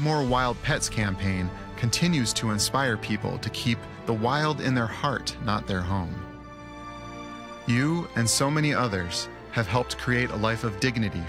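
No technical faults can be heard anywhere here.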